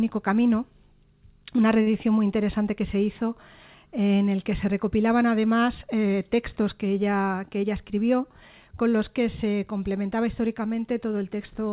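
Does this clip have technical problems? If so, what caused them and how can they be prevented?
Yes. A short stall from a late packet at 1.82 to 1.88 s: the jitter buffer ran dry, so the last sound was stretched by 42 ms until the packet arrived, with nothing lost. A deeper jitter buffer target or a steadier network path would prevent it.

A jitter buffer speed-up from 7.42 to 7.71 s: the buffer had overfilled, so pitch-period slices, about 40 ms in total, were cut, running the audio at 110% speed without changing pitch. Reducing the burst delivery of delayed packets, through less network congestion or smoother routing, would prevent it.

Both faults sit on a G.711 call path, audible as the loss of everything above 4 kHz.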